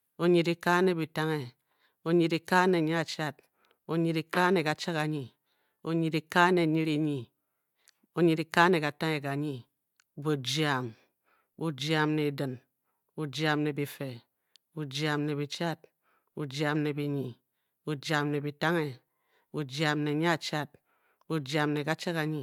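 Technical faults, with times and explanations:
Nothing technical stands out anywhere in this speech recording, so there's no fault to list.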